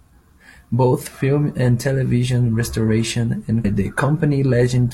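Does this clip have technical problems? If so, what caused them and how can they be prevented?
Yes. At about 3.61 to 3.66 s the speech suddenly jumps ahead with a brief blip, which is likely a stream segment skipped: one chunk failed to load and the player carried on from the next. Giving the player more buffer and retrying failed segment requests would prevent it.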